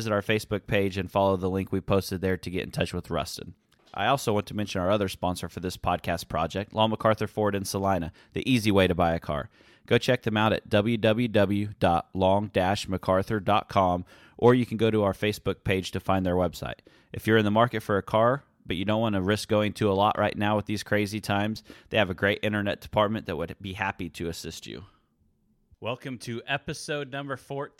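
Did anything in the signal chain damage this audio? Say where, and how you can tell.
No, nothing in the signal chain audibly damaged this speech recording. There is no point where any stage of the path can be heard to have gone wrong.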